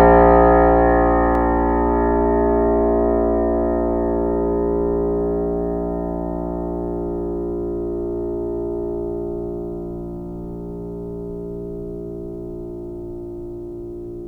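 Music, with one sharp click at 1.35 s from dropped samples: a fraction of a millisecond of the stream is likely missing, so the waveform jumps straight to a later value. Unlike a dropout, no sound is audibly lost; there is only a single thin click.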